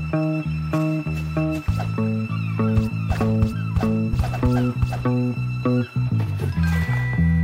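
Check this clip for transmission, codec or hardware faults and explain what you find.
One fault stands out: an electrical switching spike at 3.15 s. A nearby switch, motor or static discharge likely arced briefly, and the audio line picked up that burst. It sits on top of the sound as a sharp snap, roughly 20 dB below full scale.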